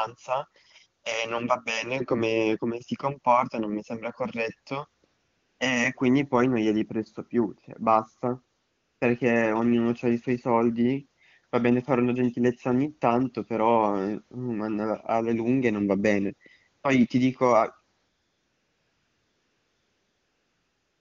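Speech in which three pauses turn into a smooth, even hiss that switches in and out: after "non mi sembra corretto" at 5.05 to 5.59 s, before "ognuno c'ha i suoi" at 8.59 to 9.01 s, and from 17.97 s to the end. This is AMR comfort noise, generated at the receiver in place of the real background while the phone judged the line silent and sent no speech frames.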